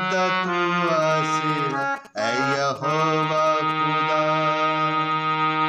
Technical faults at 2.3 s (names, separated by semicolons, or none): GSM signalling bursts